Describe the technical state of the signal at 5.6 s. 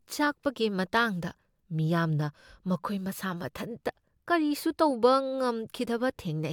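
At 5.6 s the speech signal is intact, with no audible technical fault at that moment.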